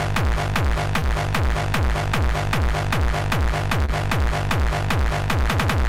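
A brief smear or wobble interrupts the sound twice, at about 0.99 to 1.03 s and 3.85 to 3.90 s. Each is short concealed packet loss: roughly 20 ms of audio arrived too late, and the receiver covered the gap by extending the preceding sound before blending back.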